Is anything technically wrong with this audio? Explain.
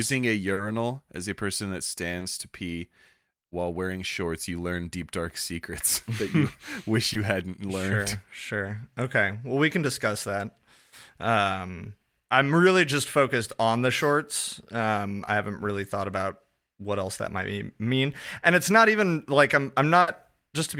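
Yes, the speech has two kinds of network fault.

Short concealed packet loss occurs four times: at 0.53 s (about 40 ms), at 2.19 s between "as a person that" and "to pee", at 7.13 s just before "hadn't learned", and at 15.25 s just before "I haven't really thought" (about 20 ms each). Audio failed to arrive in time, so the decoder extended the preceding sound and then rejoined the real signal. Each one is heard as a brief smear or wobble. On a spectrogram, harmonics run unnaturally flat across a narrow strip, and the waveform shows a small seam.

A burst of packet loss runs from 20.01 to 20.09 s. About 60 ms of consecutive audio was lost, so the receiver continued the last sound while fading it down, and the speech then resumes later with that stretch missing. It is heard as a held buzz or hiss that dies away before the speech jumps forward. A spectrogram shows a smeared, decaying band, and the waveform envelope shrinks before an abrupt restart.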